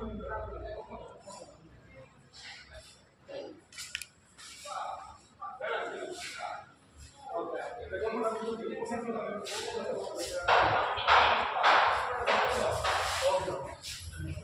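At 12.45 s there is a sudden jump in the sound, with no gap of silence. This is most likely a dropped buffer (overrun): the program failed to collect a block of samples before the hardware wrote over it, so that block was lost and the audio on either side was butted together. Roughly 30 ms goes missing, and the audio skips forward at the abrupt splice.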